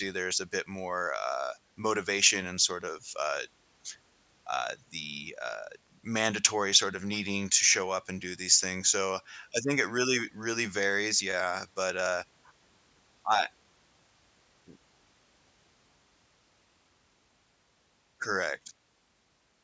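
No technical faults can be heard anywhere in the recording, and the signal stays steady and intact throughout.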